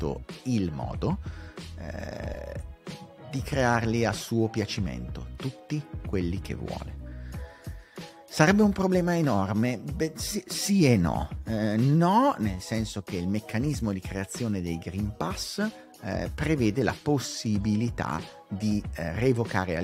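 Lost LE Audio frames at 2.34 s: a single frame, about 10 ms, failed to arrive over the Bluetooth LE Audio link, and the LC3 decoder filled the gap by repeating the previous spectrum with randomised signs, leaving a brief noisy smear rather than a silent dropout.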